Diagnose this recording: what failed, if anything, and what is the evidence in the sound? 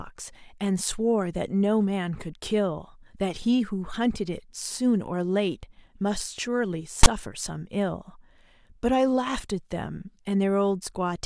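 Storage and file parsing failed: file tags were played as audio. At 7.03 to 7.07 s the speech is cut by a hard-edged burst of about 40 ms. It starts as a loud, one-sided rasp and ends in dead silence. The player read a metadata block as sample data. The text bytes give the lopsided rasp and the zero padding gives the silence. A codec dropout would fade or smear, and a glitch would give single clicks rather than this switch from rasp to silence.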